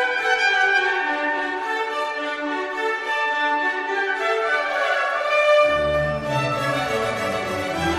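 No technical faults can be heard anywhere in this recording.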